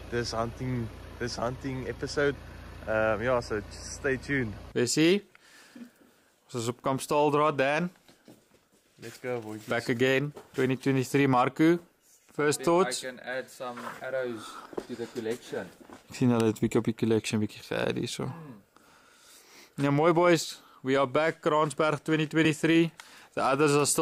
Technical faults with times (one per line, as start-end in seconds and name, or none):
15.06 dropped buffer (overrun)
19.55 dropped buffer (overrun)
20.75 dropped buffer (overrun)
22.45 dropped buffer (overrun)